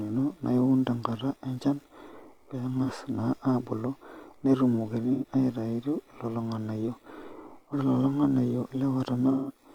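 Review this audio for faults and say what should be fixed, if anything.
AAC frame loss with concealment hits this speech three times: 2.82 to 2.89 s, 5.13 to 5.25 s just before "aitayu lelo ng'anayio", and 9.31 to 9.58 s. The gaps run about 43, 85 and 171 ms. That fits one, two and four lost frames. Each gap is filled from the last good spectrum. Adding error protection or retransmission to the transport would prevent it.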